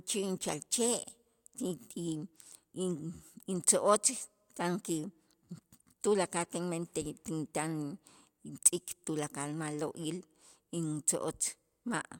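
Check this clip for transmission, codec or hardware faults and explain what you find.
No transmission, codec or hardware faults can be heard anywhere in this speech recording.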